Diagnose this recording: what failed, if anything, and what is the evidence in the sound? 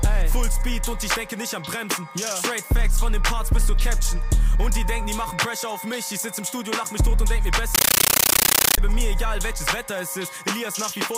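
From 7.75 s to 8.78 s the sound is replaced by very loud, harsh static that chatters at a steady 31 bursts a second, each burst about 13 ms long with silence between. This is a compressed stream played as audio, a fault at the playback output link: an AC-3 (Dolby Digital) bitstream, consistent with 640 kbps, was treated as ordinary PCM samples instead of being decoded, so each coded frame plays as noise followed by zero padding.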